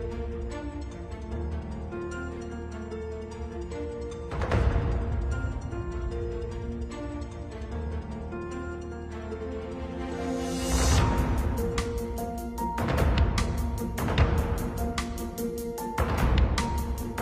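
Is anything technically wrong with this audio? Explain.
No, nothing technically wrong can be heard in this audio. There is nothing here that needs correcting.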